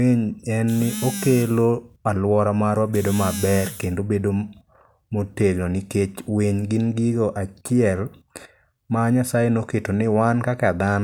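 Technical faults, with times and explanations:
No technical faults found.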